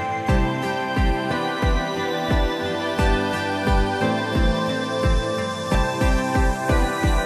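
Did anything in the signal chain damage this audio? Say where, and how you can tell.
Yes. At 5.74 s compressed frames were skipped at the codec or storage stage, and roughly 50 ms of audio is lost. The audio jumps ahead by the length of the missing frames, leaving a short join at that point. On a spectrogram it shows as a vertical line where the texture shifts abruptly, and the waveform resumes with the skipped stretch gone.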